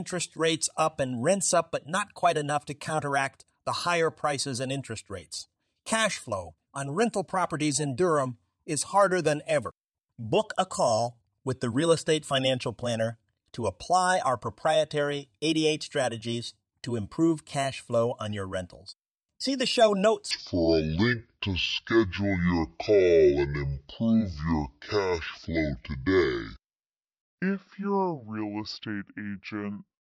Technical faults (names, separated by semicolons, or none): section at the wrong speed